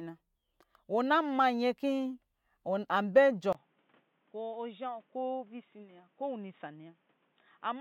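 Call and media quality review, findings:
Input switched to a poorer device, likely, at 3.53 s: 20 ms gap, speech dull and about 5 dB quieter, spectrogram empty above 3.8 kHz, new noise floor roughly 35 dB down.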